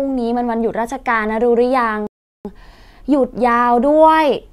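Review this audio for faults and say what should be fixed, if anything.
A rebuffering stall runs from 2.07 to 2.45 s: the player exhausted its downloaded audio, fell silent for 380 ms, then resumed the speech exactly where it halted. Nothing is skipped, but the pause stretches the timing. A larger playback buffer or adaptive bitrate switching would prevent this.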